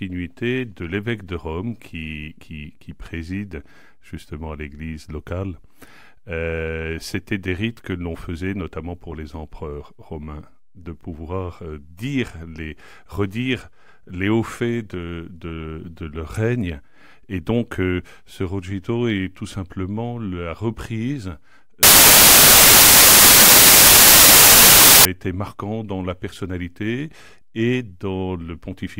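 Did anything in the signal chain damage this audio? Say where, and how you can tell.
Yes, there's a sample-format conversion problem: samples built from the wrong bytes, running from about 21.83 to 25.05 s. That stretch turns into loud, harsh broadband noise. That's the giveaway. The reader is pairing up the bytes wrongly (off by one, swapped order, or the wrong alignment), so the jittery low-order bits end up driving each sample's magnitude.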